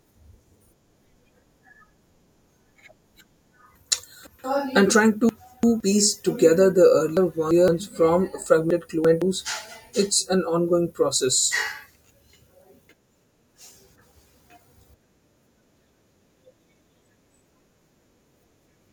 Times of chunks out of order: 3.75-4.44, 5.29-5.80, 7.17-7.68, 8.70-9.22

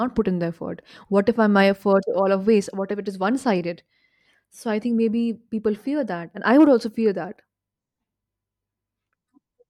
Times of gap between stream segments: none

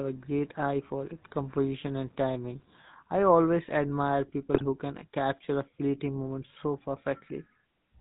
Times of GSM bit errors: 4.54-4.68

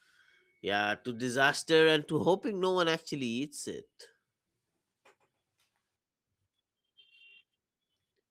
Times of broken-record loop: none

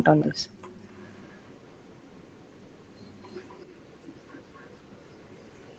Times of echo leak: 0.94-5.79

